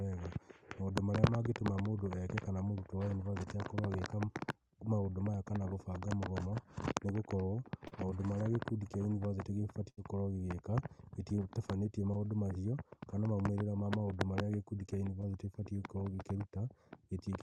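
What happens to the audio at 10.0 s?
Just before 10.0 s, from 9.89 to 9.99 s, a burst of packet loss hits the call stream. A short run of audio never reached the receiver in time, so it extended the last sound it had for about 78 ms, fading it out, then picked up again roughly 80 ms further along. After "gĩkundi kĩa yunivasĩtĩ" you hear a brief dying buzz or hiss, and the audio jumps ahead to "gũkorwo gĩgĩka gĩtitabanĩtie maũndũ" with a sliver missing.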